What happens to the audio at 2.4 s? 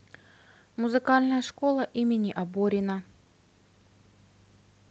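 Nothing goes wrong at 2.4 s: the speech carries on intact through that moment, with only the ordinary coding character of the Opus call path, which limits the audio to about 8 kHz of bandwidth.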